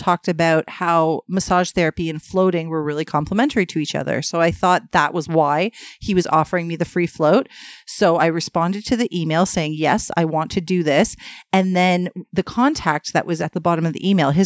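No technical faults can be heard anywhere in the recording. The speech runs on without any audible interruption or disturbance from its first moment to its last.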